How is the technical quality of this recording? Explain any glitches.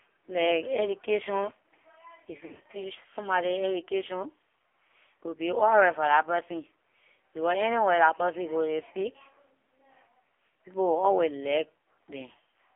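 The technical quality is poor: the speech passes through a heavily compressed narrowband mobile link, and one short stretch has dropouts.

AMR narrowband mobile codec (throughout): The speech was carried by AMR-NB, the 2G/3G phone codec, in a very low-bit mode. The heavy damage points to a rate of around 5.9 kbps. The codec rebuilds the voice from a vocal-tract model driven by sparse pulses, so at this rate the speech sounds buzzy and synthetic. The band is limited to roughly 300 Hz to 3.4 kHz, which gives a thin telephone sound with no low body and no crisp sibilance.

Lost AMR speech frames (2.46 to 2.78 s): Radio errors corrupted scattered speech frames across about 280 ms, totalling about 140 ms of lost audio. That fits roughly seven 20 ms frames. For each gap, the decoder repeated the last good pitch and vocal-tract settings at falling gain. Because the losses are scattered and the longest run is only 40 ms, the result is a cluster of brief dips and warbles rather than a fade to silence. 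The speech comes back weak or rough for a moment between the gaps.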